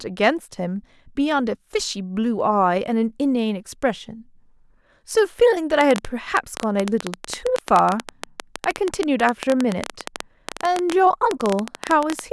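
From 5.81 s to 12.20 s, a train of clicks runs over the speech. About seventy sharp pulses arrive unevenly, averaging 11.3 per second. They peak roughly 15 dB above the speech and tick through pauses too. Electrical interference or a struggling interface is the likely cause.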